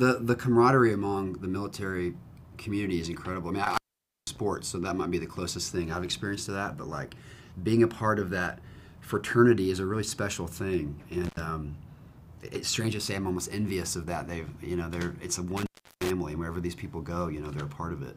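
An intermittent contact in a loose cable or plug briefly opens the line at 3.64–4.38 s, 11.25–11.40 s and 15.57–16.10 s, cutting the sound out for roughly 0.5 s, 80 ms and 0.35 s, with crackle at each break.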